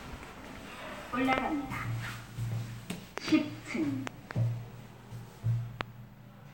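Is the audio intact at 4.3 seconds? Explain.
No, not quite. There's a loud pop spanning about 4.07 to 4.33 s, so 4.3 s falls right at its tail end. You get two sharp pops in quick succession, jumping roughly 20 dB above the surrounding audio, while the sound carries on underneath. It's likely a voltage spike, say from a switch, static or a driver hiccup, that got added to the signal and was then shaped by the downstream circuitry into those thumps.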